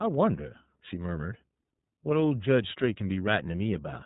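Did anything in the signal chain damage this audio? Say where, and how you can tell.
Yes, at the codec stage, throughout the speech. It has the iLBC codec's sound: nothing above 4 kHz, plus a plainly audible rough, synthetic edge. Each 30 ms frame's excitation is coded independently, which fits iLBC's 13.33 kbps mode.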